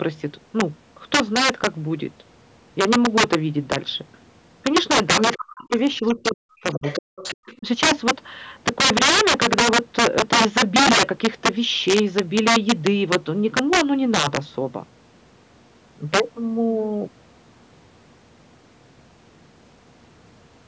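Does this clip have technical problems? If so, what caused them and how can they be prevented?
Yes. Integer overflow runs through the whole speech clip: peaks driven about 13 dB past the integer limit wrap to the opposite sign, so a small share of loud moments become violent cracks rather than flattened clipping. Prevent it with saturating arithmetic or a limiter placed before the gain stage.

Other side's voice leaking through appears at 5.26–5.37 s, 6.04–6.08 s, 6.72–7.36 s and 7.52–7.58 s as faint scraps well below the talker. It is likely residual loudspeaker echo that the echo canceller failed to remove. Prevent it with headphones, lower loudspeaker volume or a better-converged echo canceller.

Speech suppressed in double talk occurs at 5.37–5.73 s, 6.08–6.83 s, 6.99–7.09 s and 7.35–7.67 s, where the talker's voice drops very deeply in pieces. This likely happened because the echo canceller, faced with both sides talking at once, turned everything down. 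Prevent it with a double-talk detector tuned to keep near-end speech, or with headphones so there is no echo to fight.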